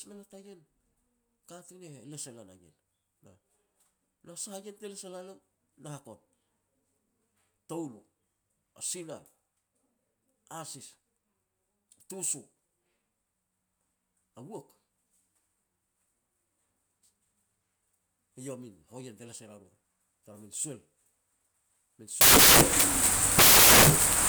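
At 22.21 s the speech gives way to loud, harsh broadband noise that runs right to the end of the clip at 24.29 s. That's samples built from the wrong bytes: the reader is assembling each sample with its bytes misaligned or swapped, so the fast-flickering low bits land in the high end of every value. What was speech turns into broadband hiss.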